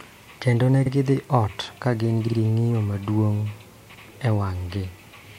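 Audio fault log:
0.85–0.90 s, 2.26–2.37 s, 3.93–4.01 s: repeated frames. Short stutters, just before "gidhi ot ka gin" and just after it. A 52 ms stretch of compressed audio is decoded again once, then twice, and a 78 ms stretch once, lengthening the sound each time.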